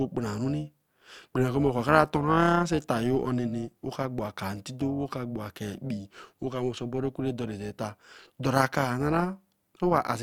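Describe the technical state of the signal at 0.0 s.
Right at 0.0 s you're already hearing overlap-add ripple, and it runs the whole way through the speech. The signal was chopped into windowed frames and rebuilt with overlaps whose gains don't add up to a flat total, so the level dips and swells by about 6 dB once per frame, somewhere around 400 times a second. That gives the speech a buzzy, robotic, metallic sound, with extra tones riding on everything.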